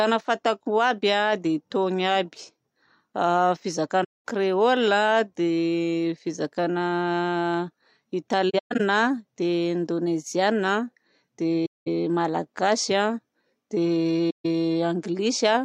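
AAC frame loss with muting at 4.04–4.24, 8.50–8.81 (broken up, longest gap roughly 150 ms), 11.66–11.88 and 14.30–14.46 s: zeroed frames leave soft-edged silent holes that fade out and in.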